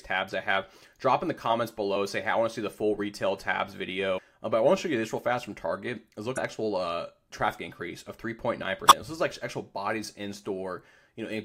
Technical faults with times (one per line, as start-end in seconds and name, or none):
4.14-4.19 damaged data in a compressed stream
6.34-6.38 damaged data in a compressed stream
8.87-8.92 damaged data in a compressed stream